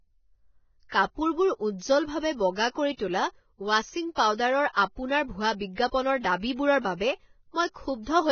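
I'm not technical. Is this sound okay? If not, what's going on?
No. For the whole clip the speech sounds hissy and grainy, dull at the top with nothing above 6.6 kHz, and its edges are smeared. That is likely heavy Vorbis compression: squeezing the file hard cuts the treble and turns fine detail into noise.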